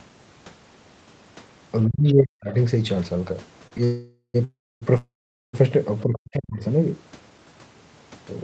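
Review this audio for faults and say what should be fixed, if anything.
Speech suppressed in double talk at 1.89 to 2.50 s and again at 6.03 to 6.61 s: in each stretch the speech sinks sharply, by roughly 40 dB at its deepest, for about half a second. The likely cause is both ends talking at once. The echo canceller could not tell this talker apart from the echo of the far end in its loudspeaker, so it pulled everything down together. A better-converged echo canceller with double-talk detection that favours the near talker would prevent this.

Short stall from a late packet at 3.67 to 3.73 s: the sound hangs for 40 ms, held a little too long, and then carries on from exactly where it stopped. A packet arrived late, the jitter buffer ran dry, and the receiver stretched the last bit of audio to cover the wait. None of the audio is lost, but the playout is pushed 40 ms later. A slightly deeper jitter buffer would absorb a delay this small.

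Call audio freeze at 3.84 to 4.36 s, 4.44 to 4.84 s and 4.97 to 5.55 s: three close-together holds of about 0.5, 0.37 and 0.56 s. Each starts as a fading continuation of the last sound and then goes quiet, for about 90, 270 and 430 ms in turn, before the audio resumes from the same point. The likely cause is packets held up in the network, which emptied the jitter buffer each time. Nothing is skipped, but gaps are inserted. Fixing the network congestion or loss, or using a more adaptive jitter buffer, would prevent this.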